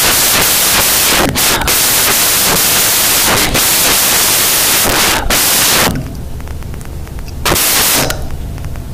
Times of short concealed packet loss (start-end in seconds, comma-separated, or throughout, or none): none